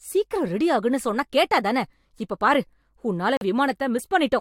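A corrupt frame muted at 3.37 to 3.42 s: damaged compressed data was rejected by the decoder and replaced with silence, so the speech drops abruptly into a hole of about 54 ms, which fits two lost frames, then resumes on time.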